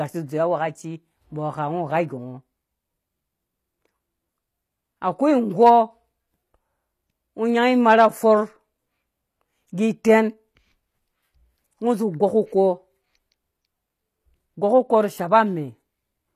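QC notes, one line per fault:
Throughout, HE-AAC compression: the speech treble sounds bright but synthetic, s sounds come out gritty and lispy, there is a metallic sheen where high meets low, and nothing sits above 15 kHz. The likely cause is HE-AAC at a low bitrate, with damage consistent with about 24 kbps. Only the lower spectrum is truly coded, and the treble is rebuilt by copying lower bands upward under a coarse envelope, so its harmonics no longer align with those below.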